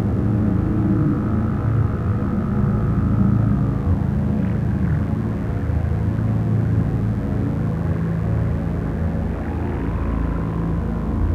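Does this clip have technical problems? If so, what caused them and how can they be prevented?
Yes: mains buzz runs through the whole clip, a raspy 50 Hz buzz sitting roughly 30 dB below the sound. Unlike a smooth, low hum, its switching spikes spread harmonics up into the kilohertz range. Keep dimmers and rectifiers away, and use shielded, properly grounded cabling.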